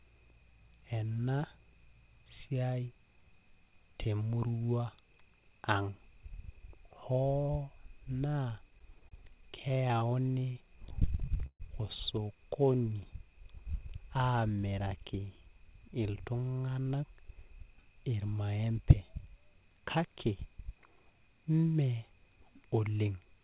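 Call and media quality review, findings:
Repeated stalls (stutter), 8.58–11.62 s: speech drags and catches 24 times, longest hold 134 ms, 377 ms filled in total (12% of span). Probable component: jitter buffer underrun from late packets. The receiver extends the last sound until data resumes, so no audio is lost.

Jitter buffer slow-down, 12.62–13.31 s: speech audibly stretched, running at 91% speed with unchanged pitch. The buffer rebuilds its reserve by repeating pitch periods, adding 67 ms.

Jitter buffer speed-up, 15.16–18.31 s: speech hurried at 108% speed, same pitch. The buffer sheds excess delay by cutting pitch-period pieces, removing about 0.3 s in total.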